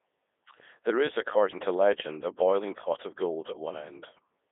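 From start to finish the speech passes through a Codec 2 vocoder, heavily damaged, with a 300 Hz to 3.6 kHz band and nothing above 3.8 kHz. Only pitch, voicing, energy and envelope survive, resynthesised from sine waves, giving a robotic, buzzy sound that fits the 3.2 kbit/s mode.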